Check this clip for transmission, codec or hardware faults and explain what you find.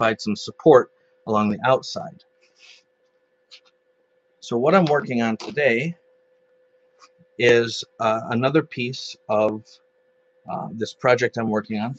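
The one fault here is sound cut by the noise suppressor, heard four times; the call path's limit of nothing above 8 kHz is expected.

Sound cut by the noise suppressor occurs at 0.87–1.26 s, 2.21–2.53 s, 5.95–7.38 s and 9.77–10.46 s. The suppressor misjudged parts of the signal as background noise and applied extra gain reduction, up to about 13 dB. Sustained and decaying portions sink in level or have their tails clipped short. The longest stretch, around 6–7 s, loses well over a second of sound.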